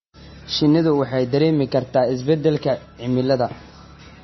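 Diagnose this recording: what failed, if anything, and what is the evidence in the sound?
The damage sits at the codec stage and runs through the whole clip. The speech has no content above 5.9 kHz, so s sounds lose their hiss and come out dull. Weak detail flickers in and out, giving a watery, swirling texture, and consonant onsets smear. The likely cause is heavy MP3 compression. Short of bits, the encoder cut the treble at a fixed point and dropped quiet frequency lines frame by frame. That fits a very low bitrate, around 24 kbps.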